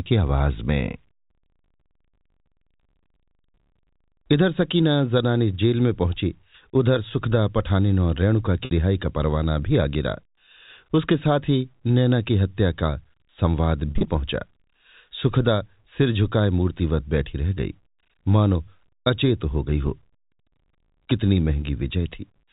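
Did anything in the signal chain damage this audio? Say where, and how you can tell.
Yes. At the network stage, packet loss with pitch repetition appears twice: around 8.65 s a 60 ms gap is bridged by a briefly held, buzzy repeat of the last pitch period, and from 13.91 to 14.05 s about 90 ms of scattered losses, runs up to 40 ms, produce stuttering buzz before the speech resumes, band-limited below 4 kHz by the G.711 telephone coding.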